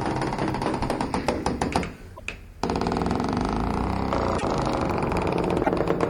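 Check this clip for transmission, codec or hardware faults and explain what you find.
Three short disturbances break up this everyday-sound recording, and they sound like a broken MP3 bit reservoir, likely the cause, at 2.16 to 2.20 s, 4.38 to 4.43 s and 5.63 to 5.69 s. Each lasts about 40 to 60 ms, roughly two frames at the 26.1 ms frame length these glitches point to. After a gap in the stream, the next frame reaches back for borrowed data and decodes bytes from the wrong frame, so the audio skips forward with a brief chirp, noise burst or dropout.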